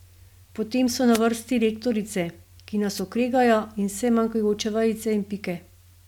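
At 1.11–1.21 s and 2.95–3.01 s, wireless microphone noise hits: the FM radio link fades, so receiver static bursts over the speech, showing as brief broadband vertical smears on a spectrogram.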